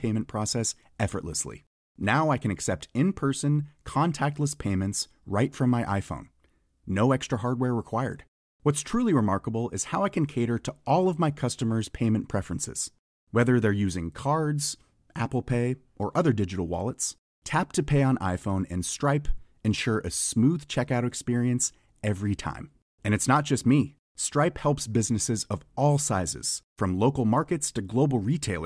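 No technical faults are audible in this speech recording.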